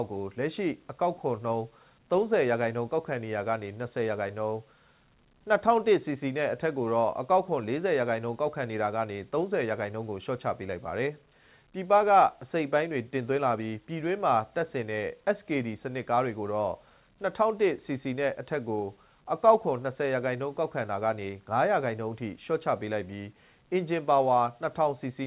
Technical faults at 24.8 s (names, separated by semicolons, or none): none